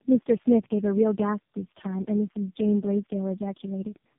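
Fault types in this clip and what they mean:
tandem speech coding: The speech went through three low-rate speech coders in a row, each re-coding the previous one's damage, ending in what sounds like narrowband AMR. It is rough, muffled and warbly. A spectrogram shows nothing above 3.7 kHz, smeared harmonics and blotchy formants.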